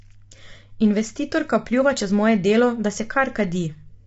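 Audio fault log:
Throughout, low-delay AAC compression: the speech sounds rough and grainy all the way through, with a hiss-like fill sitting between the harmonics and nothing at all above 7.8 kHz, so the top end feels lopped off. That's likely an AAC-ELD encoder at a starved bitrate, around 24 kbps by the sound of it. Its short frames can't resolve the pitch harmonics cleanly, and the spare bits run out, so the codec smears noise into the gaps and cuts the high band.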